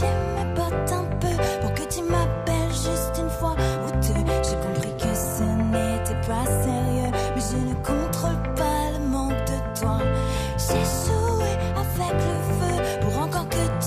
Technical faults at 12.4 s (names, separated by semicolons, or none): none